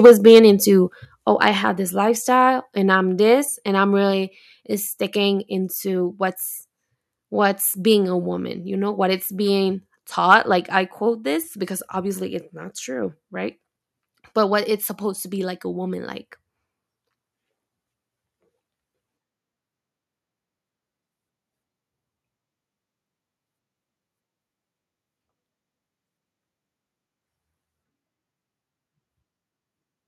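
From 0.04 to 0.39 s, just before "into oh i have", the speech crackles harshly: microphone overload, with peaks about 5 dB over the converter's limit and roughly a tenth of samples flattened, likely from input gain set too high. Inside that burst, at 0.06 s, the level drops by about 2 dB in one step. At 1.05 s, before "oh i have this", it drops again by about 5 dB. This is the microphone volume stepped down, likely the call software cutting input gain after the clipping. Unlike overload, the step lowers voice and background together without adding distortion. A shorter overload at 10.31–10.35 s, between "know what it's being" and "like i quote this", is about 2 dB over with a few percent of samples clipped, likely the same gain problem returning briefly. It is heard as a brief crackle with no drop in level afterward.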